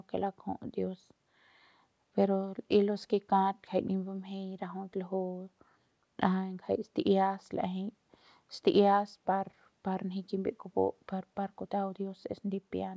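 Nothing goes wrong anywhere in this speech clip; it has simply come through a call path, and the lack of any content above 8 kHz fits a wideband call codec of the G.722 kind.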